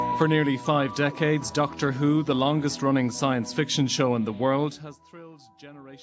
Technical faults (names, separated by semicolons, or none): zipper noise